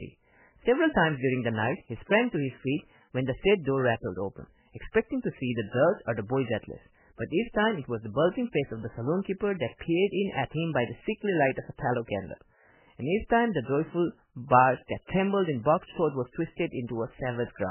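From start to finish the speech was most likely passed through heavy MP3 compression at a very low bitrate, which fits something near 8 kbps. Starved of bits, the encoder has discarded everything above 3 kHz and zeroed many weaker frequency lines that flicker on and off between frames. The result is dull, muffled speech with a watery, swirling texture, s sounds reduced to metallic chirps, and consonant onsets smeared rather than crisp.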